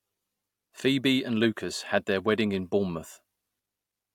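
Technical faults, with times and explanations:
No technical faults can be heard in this speech clip. Nothing at any point calls for a time or an explanation.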